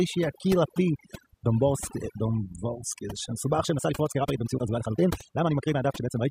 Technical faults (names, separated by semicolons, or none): overdone noise removal; time-stretched section